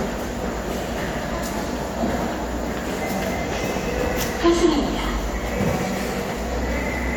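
The signal holds steady throughout, with no faults to be heard at any point in these sounds.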